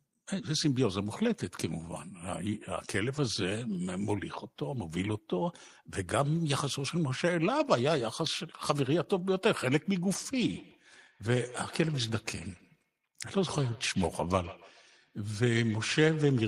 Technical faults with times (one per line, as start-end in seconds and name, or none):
10.36-16.48 feedback echo between two devices